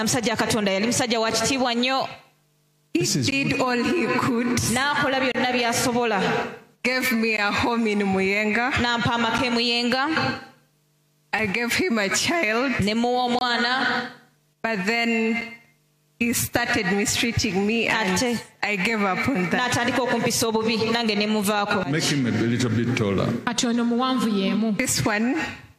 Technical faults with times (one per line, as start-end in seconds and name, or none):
1.30 gap between stream segments
3.31 gap between stream segments
5.32-5.35 gap between stream segments
7.37 gap between stream segments
9.38 gap between stream segments
11.39 gap between stream segments
13.39-13.41 gap between stream segments
15.41 gap between stream segments